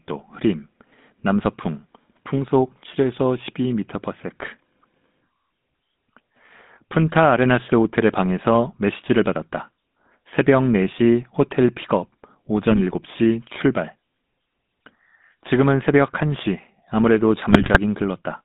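A speech recording carried throughout by the GSM full-rate codec. The band is held to roughly 150 Hz to 3.7 kHz, and the voice has the buzzy, gravelly grain of a coder that rebuilds speech from a vocal-tract filter excited by a thinned, regular pulse train. That coarse excitation is plainly audible, and its character points to the 13 kbps full-rate scheme. GSM bit errors then break the decoding twice, from 12.70 to 12.81 s and again from 17.50 to 17.79 s. Corrupted filter, pitch and gain parameters reach the decoder, so the spectrum bends and the level jumps from frame to frame, giving short squawks, pops and gargling. The first burst is brief and touches only a few frames. The second runs nearly three times as long and is correspondingly more garbled, consistent with an error rate of a few percent on a weak radio link.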